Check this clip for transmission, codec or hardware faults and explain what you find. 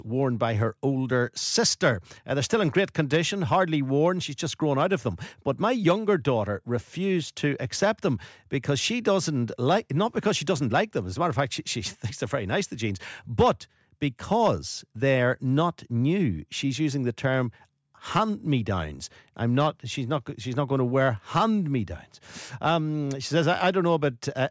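No faults turn up in the clip.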